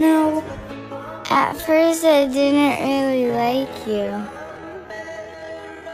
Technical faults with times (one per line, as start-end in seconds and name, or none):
1.19-5.94 time-stretched section